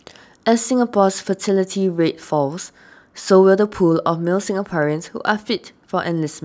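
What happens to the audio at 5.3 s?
Nothing goes wrong at 5.3 s; the speech runs on intact there, with no dropout, click, distortion or other fault at that moment.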